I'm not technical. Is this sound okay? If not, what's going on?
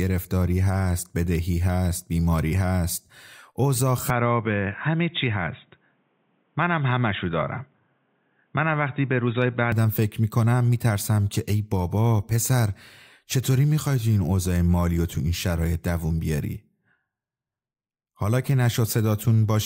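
No. From 4.1 to 9.7 s the speech turns dull, boxy and a bit quieter, likely the input switched to a poorer device, like a headset mic, before clearing up again.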